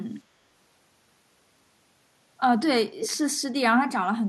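Around 3.0 to 3.17 s there's a short echo leak: a faint copy of the speech comes back about 222 ms late, roughly 10 dB under the original. Most likely the far end is on a loudspeaker and its echo canceller let a scrap slip through.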